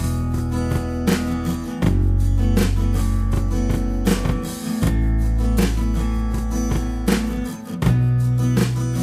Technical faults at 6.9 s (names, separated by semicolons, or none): channel delay (doubling)